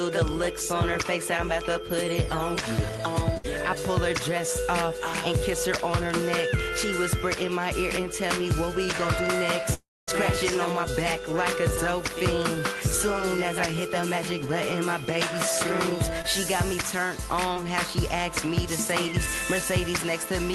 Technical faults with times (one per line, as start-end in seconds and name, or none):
3.37-3.46 burst of packet loss
9.74-10.09 long network dropout
16.22-16.26 short concealed packet loss
17.54-17.58 short concealed packet loss